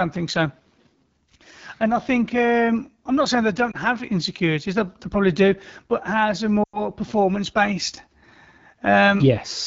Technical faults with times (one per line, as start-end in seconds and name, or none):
0.00-9.66 AMR wideband (HD Voice) codec
3.71-3.76 lost AMR speech frames
6.63-6.84 lost AMR speech frames